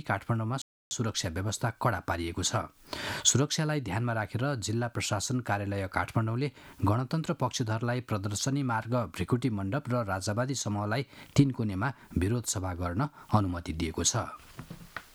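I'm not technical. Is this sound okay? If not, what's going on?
No. At 0.62 s the sound cuts out and stays silent until 0.91 s, a gap of about 0.29 s, before carrying on. That is a playback stall: the player stopped producing output for a moment, likely because it ran short of incoming data or was briefly held up by other work on the device. The sound resumes after the gap, so what you hear is a short dropout near the very start.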